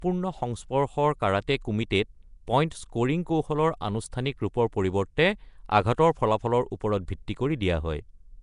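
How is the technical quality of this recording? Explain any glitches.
The recording has clearly audible codec damage from start to finish. The likely cause is Nellymoser compression, the old Flash microphone codec, working at a rate that fits about 44 kbps. It codes the speech in short fixed blocks with very few bits per sample, so weaker frequency bands get no bits and are filled with noise instead. Nothing comes through above 10.6 kHz. The result is a rough, hissy halo around the speech and a smeared, underwater quality throughout.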